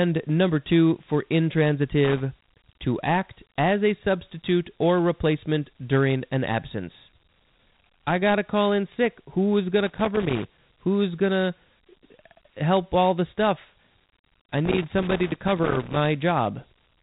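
Throughout, the speech has Dialogic VOX ADPCM damage. Nothing remains above 3.8 kHz, and a gritty hiss trails the speech, which fits 32 kbps coding.

From 9.87 to 10.59 s, and again from 14.65 to 15.97 s, loose connector crackle appears. A bad contact chops the signal into irregular, scratchy bursts.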